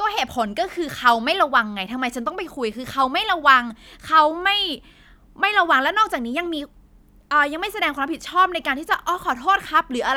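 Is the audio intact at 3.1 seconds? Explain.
Yes, the speech at 3.1 seconds is intact, with no dropout, click, distortion or other fault at that moment.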